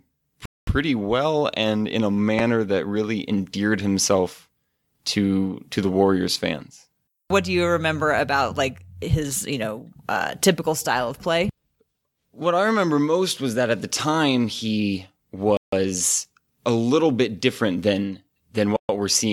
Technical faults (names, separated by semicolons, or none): Bluetooth stall; repeated buffer